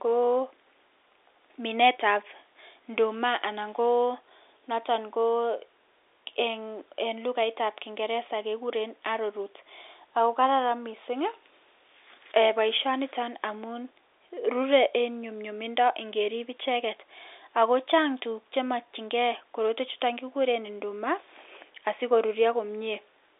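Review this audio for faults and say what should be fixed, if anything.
Nothing stood out on listening to this telephone-band speech, so there is nothing here that needs fixing.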